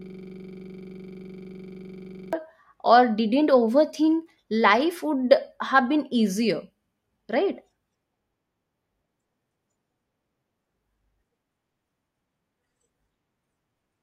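System hang loop from 0.00 to 2.33 s, already under way as the speech clip opens: a frozen system kept replaying one 42.67 ms buffer, likely 2048 samples, as a 23.4 Hz rattling stutter.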